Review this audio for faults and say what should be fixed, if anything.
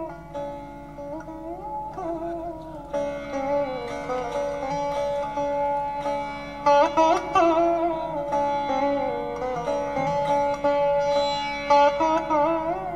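Nothing needs fixing, as no faults can be heard anywhere in this recording. There is nothing to correct or guard against here.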